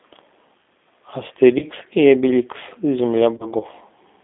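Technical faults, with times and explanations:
Throughout: G.729 codec. Speech sits in a narrow telephone band, roughly 250 Hz to 3.6 kHz, rebuilt from a filter and sparse pulses at 8 kbit/s, so it sounds plainly rough and synthetic.
1.59 to 1.67 s and 3.37 to 3.51 s: VoIP packet loss concealed by the speech codec. About 30 ms of audio is missing each time, which fits one lost packet. The decoder stretches the last sound into a fading buzzy tone or coloured noise. The voice stays weak briefly afterwards.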